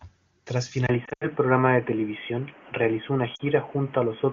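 Speech, carried over what sounds like a high-rate AMR-WB (HD Voice) link, and at 0.87 s the sound abruptly goes duller and boxier. Everything above 3.3 kHz vanishes, there's a 20 ms gap at the switch, the level shifts by about 5 dB, and a new noise floor appears about 30 dB under the signal. It stays that way to the end, which points to the input likely having been switched to a poorer device, such as a headset's narrowband call profile. Then there are lost AMR speech frames. From 1.05 to 1.27 s, 120 ms of audio drops out in bits across a 160 ms stretch, with the longest run at 80 ms. You hear the sound drop to near silence within a couple of frames before the speech comes back rough. Another 40 ms goes missing between 3.35 and 3.41 s, which shows up as a short drop to near silence.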